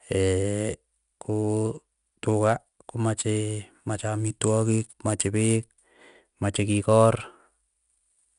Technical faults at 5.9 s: channel delay (comb filtering); 4-bit ADPCM compression

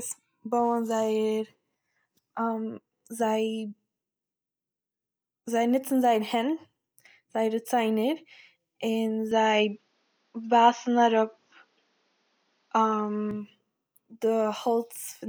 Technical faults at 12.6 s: input switched to a poorer device

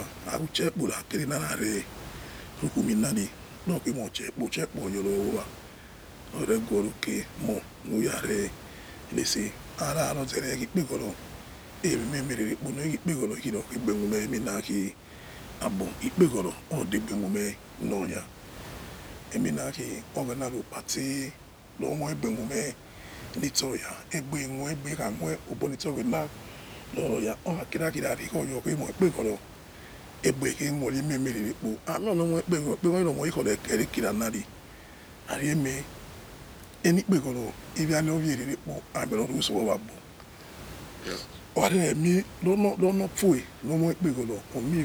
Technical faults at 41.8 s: none

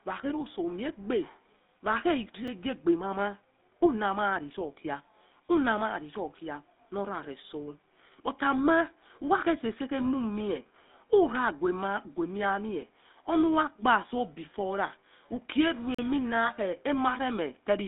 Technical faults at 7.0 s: GSM full-rate codec

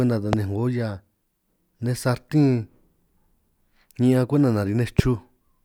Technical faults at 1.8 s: none

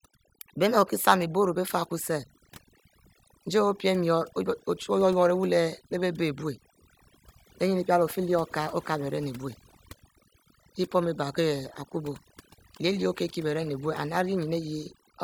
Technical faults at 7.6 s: overdone noise removal

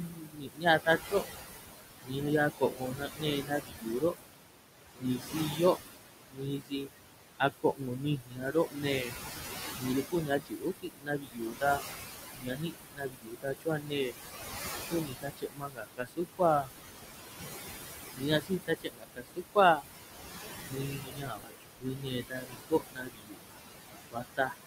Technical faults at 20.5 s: noise suppressor artifacts; speech cut by the noise suppressor

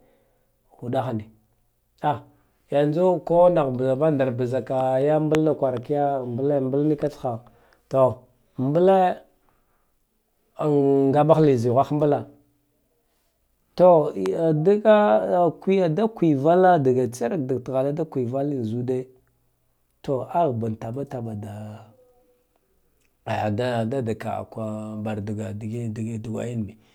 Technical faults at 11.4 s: none

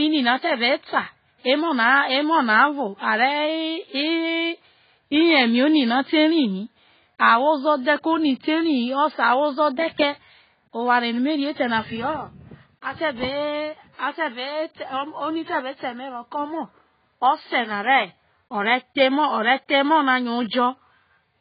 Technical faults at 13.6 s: AAC compression

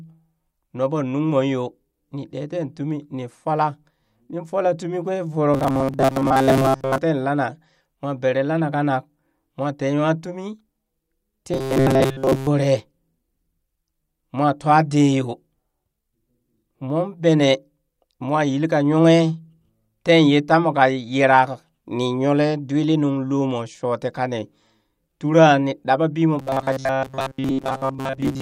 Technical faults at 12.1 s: robotic sound from repeated short buffers

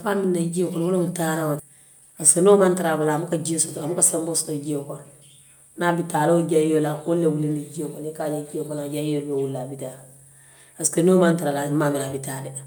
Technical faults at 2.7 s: jitter buffer speed-up

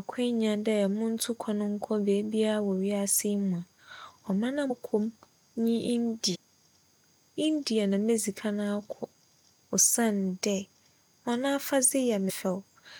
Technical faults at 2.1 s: none

